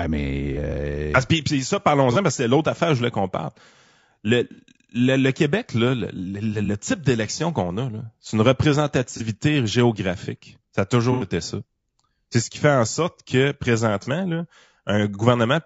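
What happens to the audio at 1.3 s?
At 1.3 s the speech is rough and grainy, with a hiss-like texture filling the gaps between the pitch harmonics, and this persists through the whole clip rather than starting there. The likely cause is low-delay AAC compression of the AAC-ELD kind, at a damage level that fits a rate around 32 kbps. Its short frames resolve voice harmonics poorly, so the grain stays constant and tied to the voice, unlike dropouts or swirling artefacts that come and go.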